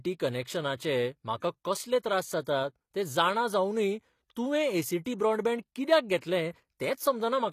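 The whole speech clip has a gritty, metallic top end. Sibilants sound lispy and synthetic. Nothing is present above 14.9 kHz. This points to HE-AAC compression as the likely cause, at a rate that fits about 24 kbps. The codec keeps the lower spectrum and fabricates the treble by copying lower bands upward. That rebuilt treble is false. Its harmonics do not match the real ones, and the damage is plainly audible.

From 1.39 to 1.42 s, a short hiss of about 31 ms leads into "कसले त्रास". This is pre-echo. A sharp onset fell late in a coding block. The noise meant for the loud part spread back into the quiet gap before it. The attack sounds blurred. The same fault returns at 6.21 s. There it lasts only about 16 ms, a brief smear just ahead of a transient.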